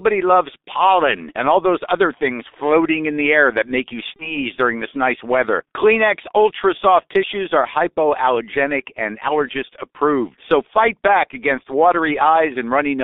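Throughout, the speech sounds muffled, hoarse and band-limited to roughly 250 Hz–3.7 kHz, with smeared consonants, the heavy damage of the G.723.1 codec at 6.3 kbit/s. From 4.16 to 4.38 s the voice is stretched out and left weak or distorted, then recovers: VoIP packet loss concealed by the speech codec, fitting a single lost 30 ms frame whose guessed replacement lingers afterward.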